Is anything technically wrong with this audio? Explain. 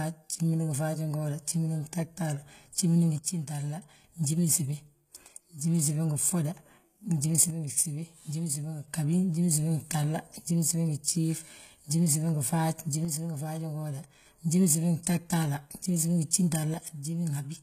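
Yes. Throughout, the speech has gritty, lispy s sounds and a synthetic-sounding treble that stops near 14.9 kHz, likely HE-AAC compression at a bitrate around 20 kbps rebuilding the top end from copied lower bands. From 3.18 to 4.04 s, 7.50 to 8.88 s, 13.05 to 14.26 s, and 16.74 s to the end, the level abruptly drops by about 6 dB, likely because one channel drops out.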